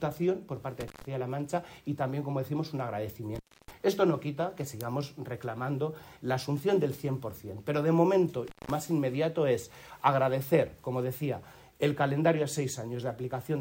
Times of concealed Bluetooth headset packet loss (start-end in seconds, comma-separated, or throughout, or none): none